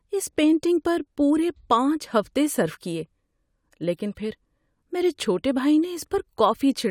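Nothing in this speech recording points to a technical fault, and the signal holds steady throughout with no audible problem at any point.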